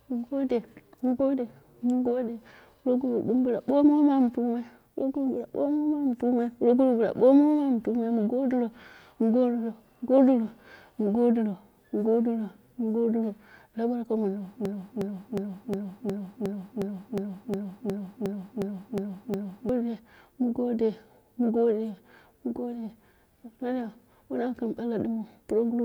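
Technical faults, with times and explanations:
14.65–19.69 s, broken-record loop: a 0.36 s fragment of the speech plays back to back 14 times, identical on every pass, so the sound stutters mechanically instead of moving on, and the speech that belonged in those five seconds is gone. The likely cause is a stalled player, encoder or stream that kept resending the last piece it held. A waveform or spectrogram shows one block of shapes tiled at exact 0.36 s intervals, with abrupt joins.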